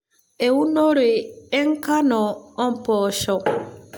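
Nothing here calls for comment: the speech runs without any audible technical trouble.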